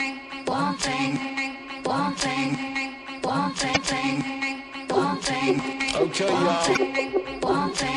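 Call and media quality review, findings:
MP3 compression, whole clip, likely cause. Encoder short of bits, treble cut at a fixed frequency, weak frequency lines dropping in and out between frames. Heard as plainly audible watery, swirly texture with dulled top end and smeared attacks; damage level fits a 64 kbps encode.

Damaged data in a compressed stream, 3.73 to 3.77 s. Corrupt frames, decoder loses sync and hunts for next header. Short chirp or blip.

Same fault, 6.73 to 6.78 s. Bad frames misread or discarded, resync on next header. Brief chirp, squawk or click.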